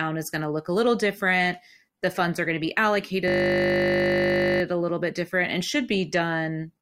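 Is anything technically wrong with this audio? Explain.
Yes. From 3.28 to 4.62 s there's a system hang loop: the system froze while the hardware kept replaying one 20 ms buffer, making a steady 50 Hz buzz.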